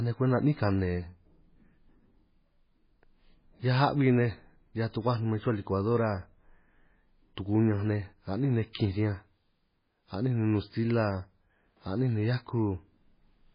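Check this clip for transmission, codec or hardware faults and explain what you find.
Heavy codec damage runs through the whole speech clip, consistent with MP3 compression. Nothing is present above 5 kHz, and the sound has a watery, swirling texture with smeared attacks and chirpy sibilants. This fits a very low bitrate, around 16 kbps, likely forcing the encoder to cut the treble and drop weak frequency lines frame by frame.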